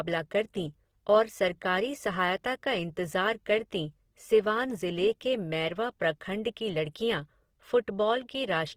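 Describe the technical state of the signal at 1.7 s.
At 1.7 s the speech carries Opus compression, present across the whole clip rather than only at that moment. The sound has a grainy, rough, noisy texture, which fits a low bitrate around 16 kbps in the codec's music mode, where starved bands are likely refilled by folded or noise-like content. Unlike MP3 damage there is little swirling, and unlike the muffled speech mode the bandwidth stays full, reaching about 20.2 kHz.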